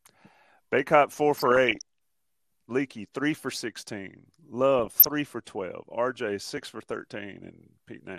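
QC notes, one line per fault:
throughout, MP2 compression: the speech sounds dull and plainly gurgling, with a granular roughness. This is likely MPEG Layer II coding at a low rate, around 80 kbps. Too few bits leave the upper sub-bands switched off or flickering, and the surviving bands are coarsely quantised. On a spectrogram the top end stops at a ragged ceiling with rectangular gaps blinking in and out. The waveform shows no sign of it.
1.35–1.82 s and 4.79–5.07 s (the second just after "three for sixteen", before "for twelve"), DAB burbling: burbling blips of noise sit over the speech. Bit errors at a small fraction of a percent have slipped past error correction into the MP2 data, so wrong samples put short blips of noise in single sub-bands and wrong scale factors make sub-bands jump in level for up to a frame. On a spectrogram this shows as isolated bright horizontal tiles, each one band tall and at most one frame wide, scattered across the stretch. 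The waveform shows small irregular bumps.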